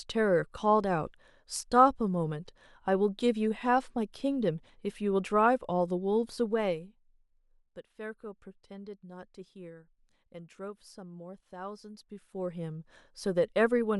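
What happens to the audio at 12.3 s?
At 12.3 s the speech is in the middle of a burst of zipper noise running from 11.73 to 12.97 s. The level is moving by around 15 dB in bare 1 dB jumps, about twenty a second, with no smoothing, so each jump clicks and the run sounds like a fast ticking zip laid over the speech. A waveform shows a staircase envelope, and a spectrogram shows a row of faint, evenly spaced vertical lines.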